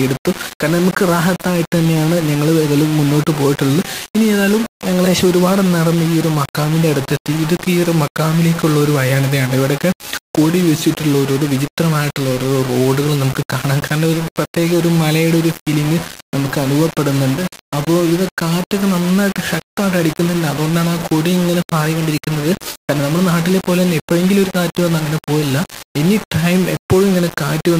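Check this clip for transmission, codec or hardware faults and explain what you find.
Two faults are audible: a coarse grain across the whole clip, and two brief pitch and speed lurches.

Low bit depth without dither: From start to finish the audio carries a grainy distortion that moves with the sound. Quiet passages turn gritty, and the error sits roughly 15 dB below the signal. The likely cause is rounding to very few levels with no dither, which fits roughly 4-bit resolution. Because the rounding error tracks the waveform, it is heard as grainy distortion on quiet sounds.

Drift correction step: From 10.30 to 11.40 s the audio suddenly runs about 6% slow and drops roughly a semitone (−106 cents), then snaps back. From 21.73 to 23.00 s it runs about 6% fast and rises a semitone (+100 cents) before returning. The likely cause is clock-matching software changing the playback rate in one jump to refill, then drain, its buffer. 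Speed and pitch shift together as a brief detuning.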